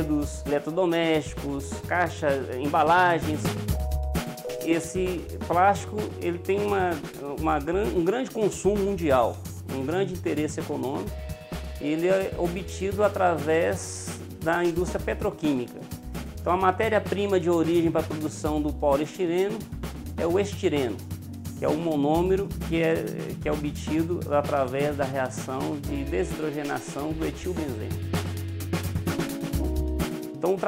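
No technical faults are audible anywhere in the audio.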